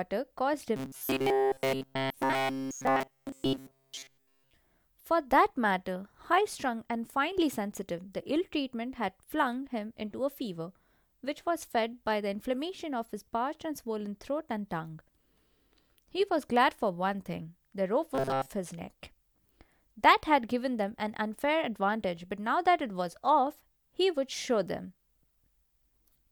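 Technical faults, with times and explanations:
0.76–4.53 s, robotic sound from repeated short buffers: New audio likely arrived too slowly, so the player looped a chunk of about 7.5 ms in place of nearly all the real signal. That loop stamps a fixed 134 Hz pitch on the speech, turning it into a stiff metallic buzz that only loosely tracks the original.
18.15–18.52 s, robotic sound from repeated short buffers: For this brief 0.37 s stretch, fresh audio was likely late again, and the same roughly 7.5 ms repeat filled most of the gap. The speech takes on the same 134 Hz mechanical drone, with some natural sound still showing through.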